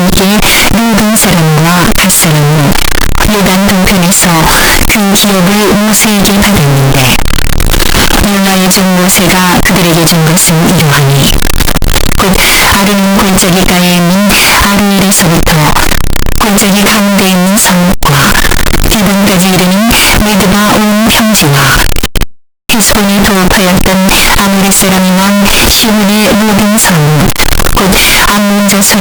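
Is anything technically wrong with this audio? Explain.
Yes. Throughout the speech there is severe, constant distortion, most likely a signed and unsigned mix-up, with samples that appear to be 16-bit read with the wrong sign convention. Flipping the top bit moves the zero point to the edge of the range, so every small swing through zero becomes a jump between the extremes. The result is a loud, harsh, buzzing roar in which even quiet moments and pauses sit at nearly full level.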